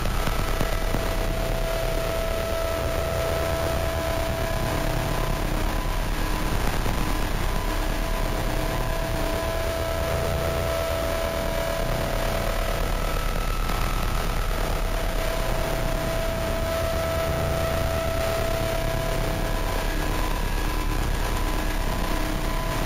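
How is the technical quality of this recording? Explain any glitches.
The recording has one fault, present throughout: imaging from sample-and-hold upsampling. Across the whole clip, the sound was brought to a higher rate by repeating each sample several times with no smoothing filter, which fits a rise from 16 kHz to 48 kHz. The missing filter leaves mirrored copies of the original spectrum. The first image fills 8 to 16 kHz at about 19 dB below the signal. It is heard as a metallic fizz that rises and falls with the sound. On a spectrogram, the content below 8 kHz appears flipped above it, tracking every event. On a zoomed waveform, the signal shows small flat steps.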